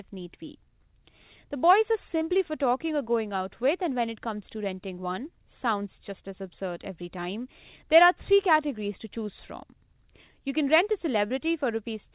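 At 2.18–2.24 s, after "boys are", and 11.27–11.33 s, after "you can rent a", short concealed packet loss: 30 ms never arrived, so the receiver stretched the preceding sound over the gap. Each is a brief smear.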